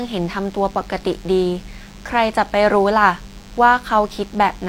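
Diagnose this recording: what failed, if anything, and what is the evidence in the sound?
The analogue wiring picked up DECT cordless phone buzz. A thin, steady buzz sits under the speech for the whole clip, well below it. Its 100 Hz rate matches radio bursts every 10 ms, rectified by the audio circuit into rich harmonics.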